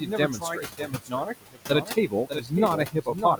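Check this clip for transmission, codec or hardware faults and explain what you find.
Three faults are present, all from the processing chain rather than the line or hardware.

A doubled audio track runs through the whole speech clip: a second full-band copy trails by roughly 0.7 s at about 5 dB down. This is likely a second capture by a slower path. Unlike acoustic echo or reverb, it has no decay and no room colour. It is a clean, fixed-lag repeat.

Noise suppressor artifacts are also constant. The suppressor pulls steady noise down by about 18 dB band by band, so the room noise, about 13 dB below the speech, dips between phrases and swells under them. Codec smearing wouldn't pump with the noise like this.

Speech cut by the noise suppressor occurs from 0.00 to 2.52 s, dropping by up to about 19 dB over around a second and a half in total, and again from 2.87 to 3.39 s, dropping by up to about 17 dB over a brief stretch. 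Soft consonants and word endings sound swallowed. Unlike a packet dropout, they turn faint rather than vanishing outright.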